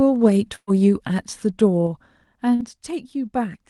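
From 0.55 to 0.70 s a burst of packet loss cut about 120 ms out of the speech. The receiver had nothing to play, so it extended the last sound it had and faded it, and the gap ends in about 50 ms of near-silence. It is heard as a brief held buzz or fading hiss that drops away, and then the speech jumps ahead with the lost stretch gone.

From 1.68 to 2.83 s the level is pulled down by roughly 10 dB, but in 3 dB jumps, about three per second, with no smoothing between them. Each jump puts a sudden step into the waveform, and that step clicks. This is zipper noise: a slow ticking that rides on the speech while the level falls.

Within that stretch, from 2.55 to 2.62 s, a short concealed packet loss left about 40 ms that never reached the decoder in time. The receiver synthesised a stand-in from the preceding audio and blended back into the real signal. The result is a brief smear or wobble, and a short consonant there may simply be missing.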